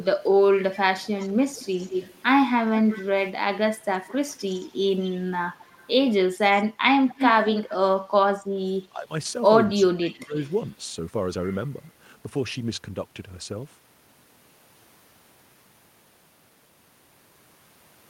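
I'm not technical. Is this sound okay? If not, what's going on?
No. There is an echo leak at 0.04 to 2.22 s, 2.87 to 3.04 s, 4.04 to 5.94 s, 6.54 to 7.75 s and 10.29 to 10.69 s. A delayed copy of the speech trails it by about 0.2 s, loudest at 6.54 to 7.75 s and faintest near 10.3 s. The likely cause is a loudspeaker on one end whose echo canceller failed to remove it.

There is also speech suppressed in double talk at 8.89 to 9.11 s and 9.67 to 10.37 s. The speech drops sharply in volume for short stretches, deepest in the second one. This likely happens because both sides talked at once and the echo canceller turned that side's voice down along with the echo.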